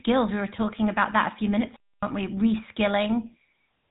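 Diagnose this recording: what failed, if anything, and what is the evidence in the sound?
Codec stage: the GSM full-rate codec runs throughout, with nothing above 3.8 kHz and that buzzy, gravelly roughness on the speech, which fits 13 kbps coding.

Playback stage: a playback stall cuts the speech dead from 1.76 to 2.03 s, leaving 265 ms of silence, likely the player starving for data or its thread blocking.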